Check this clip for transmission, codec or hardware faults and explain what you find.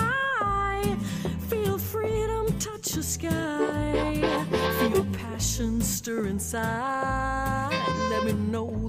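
No transmission, codec or hardware faults.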